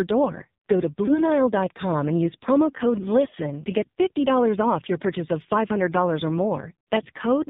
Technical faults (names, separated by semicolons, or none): AMR narrowband mobile codec; lost AMR speech frames